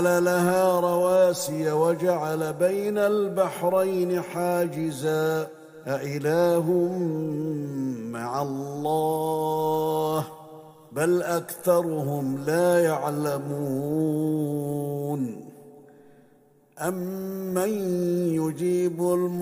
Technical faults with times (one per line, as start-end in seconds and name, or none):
none